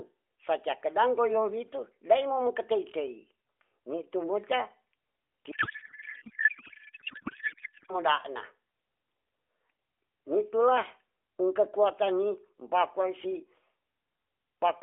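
From 5.52 s to 7.99 s the speech gives way to garbled noise and warble that barely tracks it. This is a codec payload misread. The AMR frames were packed in octet-aligned form but decoded as bandwidth-efficient. Every field lands in the wrong place. The decoder still finds frames that look valid and synthesises nonsense from them. Around it, the AMR narrowband line sounds band-limited and lightly coded, consistent with about 12.2 kbps.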